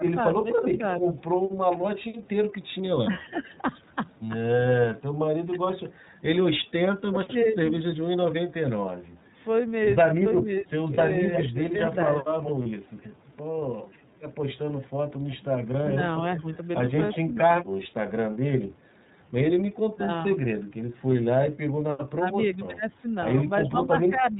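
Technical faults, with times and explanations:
Throughout, iLBC codec: the speech was squeezed through a narrowband VoIP codec at 13.33 kbps in 30 ms frames, each coded on its own. Nothing above 4 kHz survives, so the voice sounds band-limited, with a plainly audible rough, slightly synthetic edge on every syllable.
0.00 to 12.31 s, speech suppressed in double talk: with both sides likely talking at once, the echo canceller could not tell the local voice from loudspeaker echo and turned it down. Across about two seconds in all, the voice dips by up to about 20 dB or drops out in pieces.
0.69 to 2.01 s, echo leak: a far-end loudspeaker's echo likely slipped past its canceller and was sent back. A delayed copy of the voice trails it by 369 ms, at about 10 dB below the speech.
10.94 s, lost iLBC frames: one 30 ms packet went missing, and the decoder filled the gap by repeating the last pitch cycle mixed with noise. 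It sounds like a brief buzzy held vowel, and the voice recovers at once because the next frame stands alone.
11.33 to 17.18 s, echo leak: the same incomplete echo cancellation likely lets a longer stretch of the returned voice through, now 359 ms behind and only about 5 dB below the speech.
12.63 s, lost iLBC frames: a second single 30 ms frame was lost and concealed the same way, giving another short breathy, held-vowel blip before clean decoding resumes on the following frame.
15.38 to 24.39 s, speech suppressed in double talk: overlapping talk likely drove the echo canceller to attenuate the near-end voice again, for about two seconds in total, with drops of up to about 25 dB that leave the voice dull, faint or broken up.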